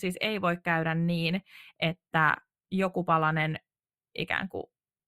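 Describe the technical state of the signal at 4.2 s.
At 4.2 s the speech carries channel delay (comb filtering), as it does for the whole clip. One channel arrives a tenth of a millisecond or so behind the other, which fits an offset of only a few samples, and when the two are summed to mono the shared content cancels at regularly spaced frequencies, the first notch sitting near 5 kHz. The upper range therefore sounds hollow and slightly dulled, with a fixed phasey colouration.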